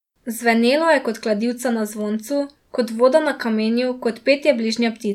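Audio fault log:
No fault was found in this speech clip.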